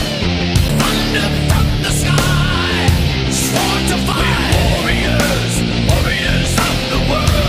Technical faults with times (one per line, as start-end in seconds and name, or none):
0.68 CD skip
4.12 CD skip